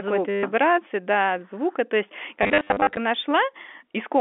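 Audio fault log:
0.30 to 0.43 s: packet loss with last packet repeated. A 130 ms gap is filled by replaying one packet. The loop ignores pitch, so it buzzes near 100 Hz, which fits 10 ms packets.
2.43 to 2.97 s: packet loss with last packet repeated. About 330 ms is lost across 540 ms, in runs up to 40 ms. This gives scattered robotic stutters.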